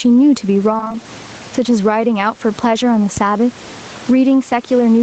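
Gain pumping runs through the whole speech clip. The level swings by around 15 dB. Loud and soft parts sit close together, and the sound feels squashed. The likely cause is gain set far too high, with a fast limiter clamping down.

From 0.77 to 1.04 s there is repeated packet loss, giving a choppy, robotic sound. A handful of short holes, the longest 22 ms, are patched by stretching the previous sound. About 45% of that stretch is concealed this way, so pieces go missing.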